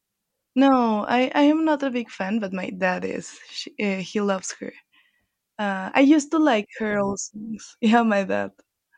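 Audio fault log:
No faults heard anywhere in the speech recording.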